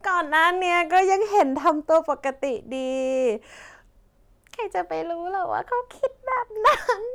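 From 0.35 to 1.00 s and again from 1.38 to 1.98 s, the speech shows hard clipping: peaks run about 3 dB past what the signal path can pass and are sliced flat, giving a gritty crackle on the louder syllables. A brief burst at 6.66 to 6.70 s overshoots by about 5 dB and sounds harsher. On the waveform the tops sit as flat plateaus. A spectrogram shows vertical smears of added harmonics reaching high up the spectrum.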